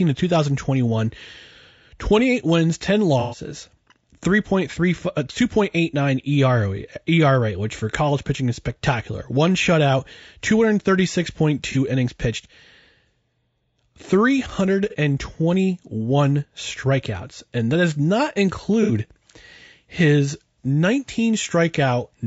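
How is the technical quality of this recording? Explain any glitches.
The quality is limited, with audible coding damage throughout and four brief glitches. The speech sounds rough and grainy, with a dulled top band. This is likely low-delay AAC compression at a low bitrate, around 32 kbps.

AAC frame loss with concealment occurs at 3.20 to 3.40 s, 11.72 s, 14.90 s and 18.83 to 18.91 s. Missing audio is patched from the preceding spectrum. This produces smeared, noisy spots lasting 120, 30, 30 and 60 ms.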